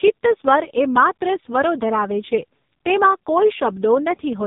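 Speech runs through the AMR narrowband mobile codec from start to finish. Nothing above 3.8 kHz survives. The voice sounds heavily buzzy and synthetic, which fits a low mode near 5 kbps.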